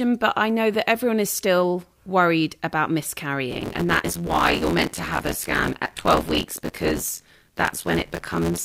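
From 3.51 s onward a robotic 86.1 Hz rattle rides the speech. This is buffer tearing: part of each period, which fits a 512-sample buffer, replays audio about 20 ms old.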